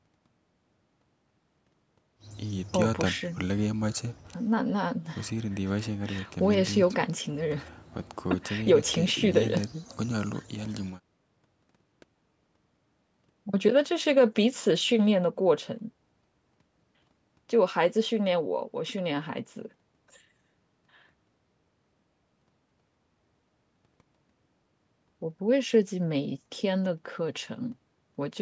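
No technical faults can be heard anywhere in this speech recording. It carries the mark of a call's microphone processing, with the lowest bass trimmed away and nothing present above 8 kHz.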